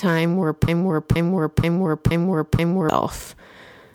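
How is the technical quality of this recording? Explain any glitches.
The recording has one clear glitch, a broken-record loop from 0.68 to 2.89 s. A 0.48 s fragment of speech repeats exactly, back to back, five times, and the speech that belonged there is lost. The likely cause is a stalled player or stream resending its last buffer. Unlike an echo, each pass is identical and undecayed, with no new material between repeats.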